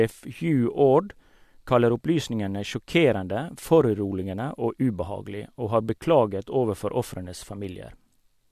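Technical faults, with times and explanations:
No technical faults are audible.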